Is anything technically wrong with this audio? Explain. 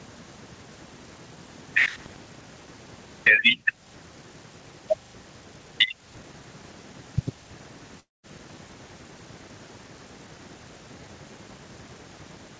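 Yes, there are two faults in this speech.

Gain pumping runs throughout. The level swings by roughly 5 dB, bringing loud and soft parts closer together, likely because a fast limiter is clamping an overdriven input. On the waveform the envelope looks flattened.

A long network dropout occurs from 8.00 to 8.26 s. About 240 ms of audio was likely lost in transit. The receiver briefly extends the last sound as a fading buzz or hiss, then leaves about 190 ms of near-silence. A spectrogram shows a smeared tail followed by an empty gap.

The call codec passes nothing above 8 kHz, which appears as a clean ceiling on the spectrogram.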